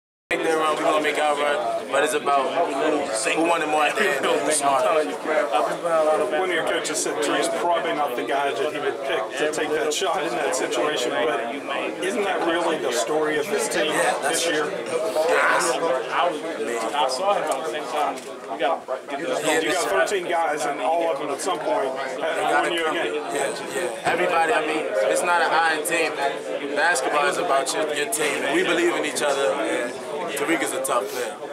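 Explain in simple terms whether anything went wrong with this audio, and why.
Something did go wrong, right at the top. There's a cut-off start: the clip opens with about 0.31 seconds of dead digital silence, and then at 0.31 s the sound just switches on mid-flow instead of building up or fading in naturally. That happens when the recording or stream kicks in a beat late, so whatever was already playing gets chopped off and you land in the middle of it.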